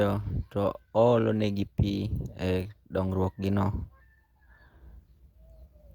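Speech, with no audible faults.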